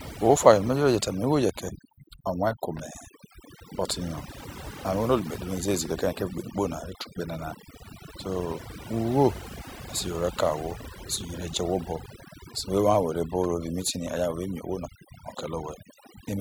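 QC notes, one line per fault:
throughout, overdone noise removal: a noise reduction stage was pushed too hard, pulling individual frequency bands down or out whenever they sat close to its noise estimate, so quieter parts of the speech vanish with the noise, leaving near-silent gaps with twinkling specks.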